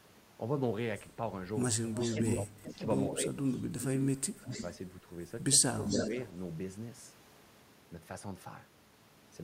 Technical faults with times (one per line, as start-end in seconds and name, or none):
1.94-2.37 echo leak
2.15-3.41 speech suppressed in double talk
3.52-4.19 echo leak
4.36-4.49 speech suppressed in double talk
4.50-4.71 echo leak
5.71-6.14 speech suppressed in double talk
5.86-6.32 echo leak